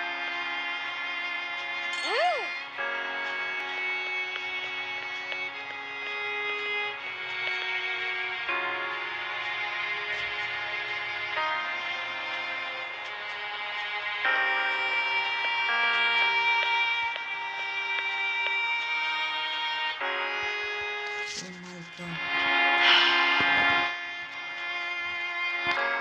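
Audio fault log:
Nothing stood out as a fault on listening to the audio.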